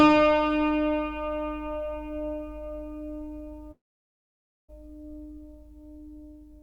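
From 3.71 to 4.70 s the sound breaks off for nearly a second, briefly extended as fading noise, then silence; likely a long network dropout losing that audio.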